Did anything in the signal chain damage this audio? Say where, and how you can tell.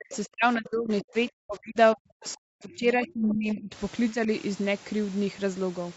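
Yes. Speech suppressed in double talk, 0–1.77 s and 1.94–3.72 s, dropping by roughly 40 dB, plus a slight dip at 4.12–4.28 s. This is likely the call's echo canceller ducking everything during overlapping talk.

Other side's voice leaking through, at 0.11–0.17 s, 2.74–2.78 s and 3.29–3.34 s, as faint scraps well below the speech. The likely cause is incomplete echo cancellation in the call processing.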